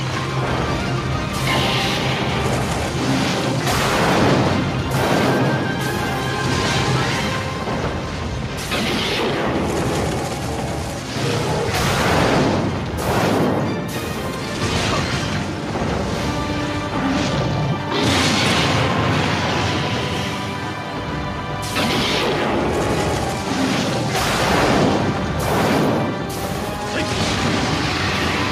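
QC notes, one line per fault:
No faults found. Nothing in the audio calls for a QC note.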